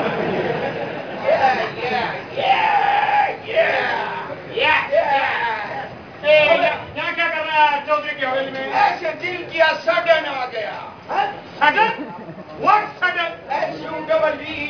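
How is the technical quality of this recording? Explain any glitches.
Quality is compromised by aliasing throughout. The sample rate appears to have been lowered to about 11 kHz without an anti-alias filter, so content above 5.5 kHz folds back as unrelated tones roughly 25 dB below the signal, sounding gritty and metallic.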